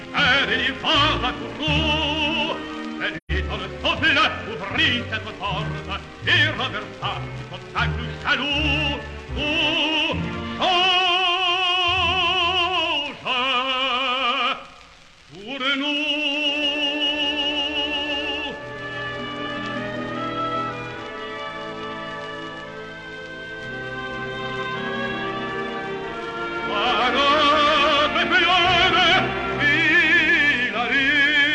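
Between 3.16 and 3.31 s, a run of compressed frames failed to reach the decoder, and it handled the gap with AAC frame loss with muting: it zeroed the spectral content for the missing blocks instead of concealing them. Because neighbouring frames overlap, the audio fades down into silence and back up rather than cutting off, leaving a soft-edged dropout about 128 ms long, which fits three lost frames.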